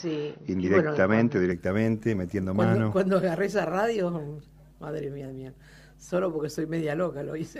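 From the start to 1.52 s the sound is dull and boxy, with nothing above about 6.1 kHz, a faint extra noise floor and a level a few dB off. Then it opens up with no gap. That's likely an input switched to a poorer device, then switched back.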